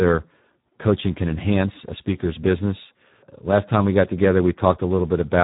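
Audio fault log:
Throughout: Speex codec, heavy damage. The speech sounds hoarse and grainy, with a buzzy, slightly robotic edge, and there's nothing up top past about 3.8 kHz, so it's boxed into a narrowband phone sound. That fits Speex running at around 8 kbps, where the CELP coder has too few bits to describe the excitation properly. The waveform gets replaced by a coarse approximation, which is where the rasp and the mechanical quality come from.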